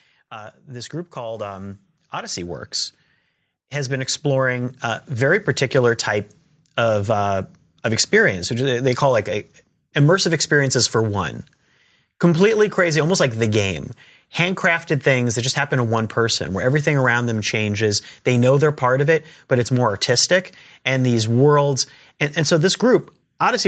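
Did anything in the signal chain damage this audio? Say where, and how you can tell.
Yes. The damage comes from the call processing stage, as automatic gain rising occurring twice. From 0.3 to 2.6 s the level swells by about 8 dB, then again from 3.72 to 5.45 s by about 7 dB, ending just before "type of uh of". The gain control judged the input too quiet and raised its gain slowly, so voice and background noise climb together. On a waveform, the envelope widens steadily across each span. On a spectrogram, the noise floor brightens in every band at once.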